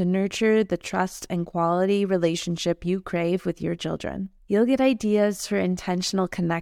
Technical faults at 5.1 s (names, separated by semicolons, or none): none